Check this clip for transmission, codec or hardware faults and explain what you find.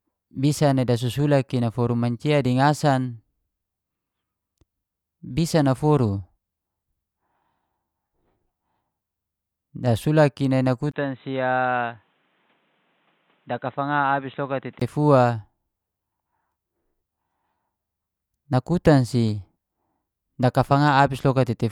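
One fault is present. Input switched to a poorer device, from 10.91 to 14.82 s, just after "i nai". A 20 ms gap marks the switch, then the speech loses everything above 4 kHz and turns dull and boxy, drops a few decibels, and carries a new background noise about 40 dB down. The capture source was likely changed mid-recording to a narrowband microphone or headset call profile, and it reverts at 14.82 s, where the brightness returns.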